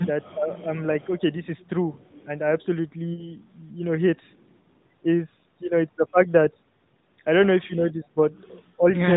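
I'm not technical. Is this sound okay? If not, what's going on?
No. Three kinds of fault can be heard.

Echo leak, at 0.22–0.30, 0.53–0.63, 1.00–1.34, 1.99–2.24 and 4.29–4.57 seconds: a faint, delayed copy of the voice trails behind it, 311 milliseconds late. The likely cause is that the other person was on speakerphone and their phone failed to remove everything its microphone picked up from the loudspeaker. The leftover part was sent back down the line, so the voice returns as a faint ghost.

Speech suppressed in double talk, at 0.31–0.51, 7.67–8.20 and 8.77–8.98 seconds: the voice briefly dips and thins, sounding pushed back. This likely happened because both sides spoke at once. The echo canceller couldn't tell the real talker apart from the loudspeaker echo, so it turned both down.

Lost AMR speech frames, from 3.14 to 3.32 seconds: the voice briefly smears and weakens, then recovers a little rough. 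A radio glitch corrupted a small chunk of the signal, about 40 milliseconds, which fits two lost frames. The phone's mobile codec filled the gap by stretching the last good sound and letting it fade, which makes the short drawn-out fade you hear.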